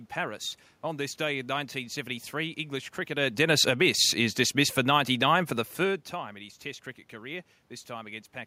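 Automatic gain falling runs from 3.1 s to 6.11 s, ending just before "in his". The gain control eased its gain down by about 5 dB across those three seconds, so the speech sinks steadily and the room noise sinks with it. That shared drop separates it from the talker's own movements near 3.0 s and 5.5 s, which change only the voice level while the background holds steady.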